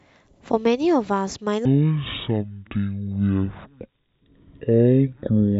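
A speech clip in which playback from 1.65 s to the end likely runs against the wrong clock, producing a section at the wrong speed. The audio moves at half speed, so speech turns slow and drawn out while its pitch drops by roughly ten semitones, deep and sluggish until the clip ends.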